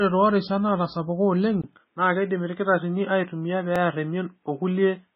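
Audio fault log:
Throughout: MP3 compression. The speech has a watery, swirling texture, and nothing reaches above 5.5 kHz, so the treble is cut off at a fixed ceiling. The likely cause is heavy MP3 coding at a very low bitrate, near 16 kbps. Starved of bits, the encoder discards the top band and zeroes weak frequency lines, which flicker on and off from frame to frame. This smears consonant attacks and makes s sounds chirpy and metallic.
1.62–5.15 s: input switched to a poorer device. Right after "toorishat naatasapuka oleng" there is a 20 ms gap. From then on the sound turns duller and boxier, with nothing above 3.8 kHz, which is narrower than the band before it. The likely cause is the recording path changing over to a lesser microphone or a headset call profile in mid-take. A faint new noise floor sits far below the speech, and the loudness stays about the same, so the change is heard mainly as lost brightness and a different tone.
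1.73–1.76 s and 3.76–3.78 s: overlapping chunks. At each of these joins a 23 ms slice of audio is played twice, producing a brief stutter or click. The first lands just after "toorishat naatasapuka oleng". The two events are 2 s apart, which fits audio processed in 2-second chunks where each chunk begins slightly before the previous one finished. The overlapping span is therefore repeated at every boundary, so the glitch recurs at a steady interval.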